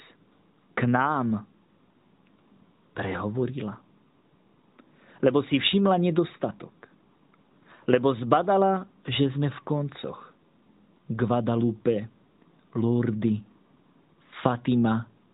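No technical faults can be heard anywhere in this speech. It comes through the AMR narrowband mobile codec, which cuts everything above 4 kHz and leaves only a light synthetic edge, as fits its highest 12.2 kbps mode.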